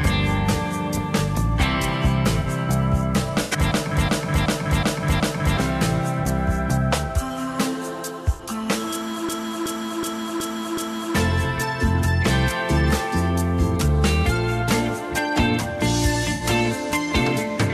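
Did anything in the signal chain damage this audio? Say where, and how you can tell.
Yes. The codec stage shows corrupt frame concealment at 2.40–2.46, 3.42–3.58, 6.23–6.26, 8.34–8.41 and 16.33–16.44 s. The decoder detected damaged AAC frames and masked them.

The driver or buffer stage shows a system hang loop at 3.72–5.57 and 9.29–11.15 s. A 371.5 ms slice repeats exactly, five times, at 2.69 Hz. It fits a 16384-sample ring buffer replaying while the system froze. About two seconds of audio are lost each time.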